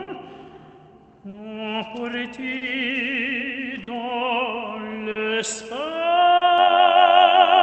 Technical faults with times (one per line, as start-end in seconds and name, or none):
0.00-7.63 clock drift between sender and receiver
0.03-0.09 short stall from a late packet
1.29-1.35 short stall from a late packet
2.57-2.63 short stall from a late packet
3.83-3.89 short stall from a late packet
5.11-5.17 short stall from a late packet
6.37-6.43 short stall from a late packet
6.58-7.63 overlap-add ripple